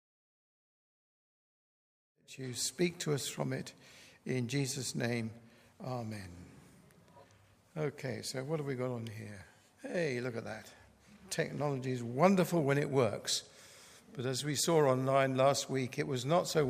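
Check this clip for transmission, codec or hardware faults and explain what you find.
No faults detected.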